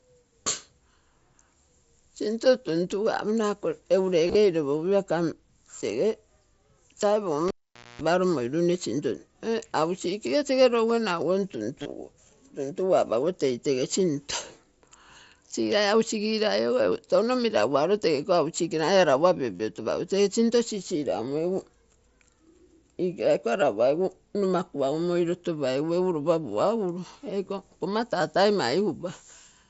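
At 0.43 s there is a brief concealed Bluetooth headset packet loss lasting about 22 ms. The receiver filled the gap by repeating the closest-matching slice of the preceding audio. On a spectrogram it shows as a thin vertical strip of copied harmonics. At 4.27 to 4.35 s a scattered cluster of losses covers about 52 ms within a 75 ms stretch, with no run longer than about 22 ms.

From 7.48 to 8.02 s the cable was pulled and plugged in. A pop opens a silence of about 490 ms. Within it comes roughly 240 ms of 60 Hz mains buzz while only the tip makes contact, then a second pop as the sound returns. The waveform shows two sharp spikes around a flat gap, and the spectrogram shows a 60 Hz hum band with stacked harmonics within the gap.

Further concealed packet loss follows at 11.82 to 11.86 s, about 30 ms, and at 19.56 to 19.60 s, about 38 ms. These are long enough that the repeated slice becomes a short buzzy tone held at steady level, with a slight warble where genuine audio resumes. 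On a spectrogram these appear as periodic, evenly striped patches that break the natural harmonic movement. Throughout, the mSBC headset path band-limits the sound at 8 kHz, visible as a hard spectral ceiling.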